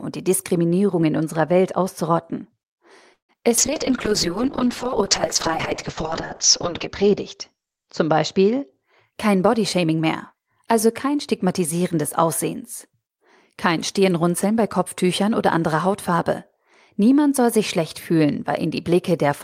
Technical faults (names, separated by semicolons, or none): call audio freeze; short concealed packet loss; call bitrate drop; jitter buffer slow-down; jitter buffer speed-up